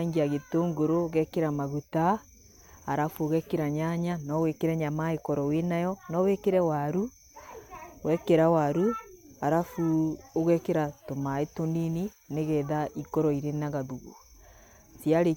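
Nothing stood out as a technical fault on listening to the speech recording.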